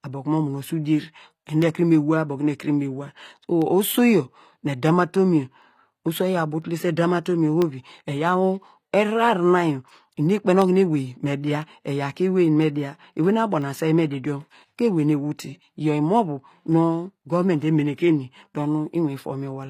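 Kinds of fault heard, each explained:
HE-AAC compression: The treble sounds synthetic rather than captured, with sibilants turning gritty and metallic and harmonics that no longer line up above the crossover. This is most likely HE-AAC v2 at a low bitrate, around 24 kbps, rebuilding the upper band by copying lower bands upward. The damage is plainly audible throughout. A spectrogram shows repeated, smeared texture in the upper band and nothing at all above 15.5 kHz.
Periodic USB or driver dropouts: A bus or driver stall repeats at a fixed interval, briefly replacing the audio with silence. It is heard as regular ticks exactly 1.0 s apart, about twenty of them from 0.62 s to 19.63 s, audible only while there is signal. Each gap lasts a tiny fraction of a millisecond. A waveform shows momentary drops to silence, and a spectrogram shows thin vertical broadband lines spaced evenly at one-second intervals.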